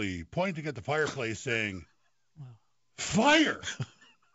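No technical faults are audible.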